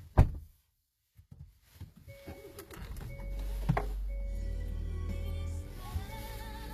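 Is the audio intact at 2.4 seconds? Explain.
No. At 2.4 seconds, as across the whole clip, the treble sounds gritty and metallic, likely from HE-AAC compression at a low rate, which fits 24 kbps. Unlike a plain low-pass cut, the highs remain bright but are rebuilt from copied lower bands, so they sound plainly false, with nothing above 14.9 kHz.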